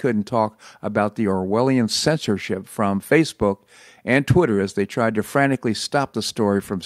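Nothing goes wrong anywhere in this bit of speech, so there's no technical fault to point to at any moment.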